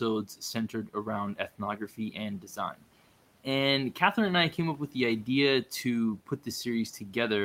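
Speech cut by the noise suppressor occurs at 0.26 to 1.06 s, 1.78 to 2.15 s and 2.4 to 2.85 s in this speech clip. Each time, the suppressor mistakes parts of the speech for background and pulls them down, by about 10 dB in the first two passages and about 12 dB in the third. Only a fraction of each span, roughly 150 to 200 milliseconds, is affected, so soft sounds seem swallowed. The room noise sits about 25 dB below the speech.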